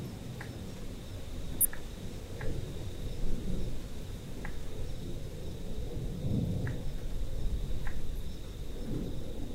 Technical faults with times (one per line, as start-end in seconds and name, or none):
1.60-1.65 damaged data in a compressed stream
4.12-4.16 damaged data in a compressed stream
6.04-6.09 damaged data in a compressed stream